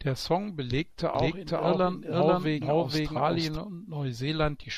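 From 1.15 to 3.57 s the speech is doubled: a second full-band copy about as loud trails roughly half a second behind, likely from a second, slower capture path. Unlike an echo, it never fades or takes on room colour, and starts and stops abruptly.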